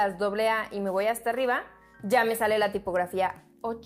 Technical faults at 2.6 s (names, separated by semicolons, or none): none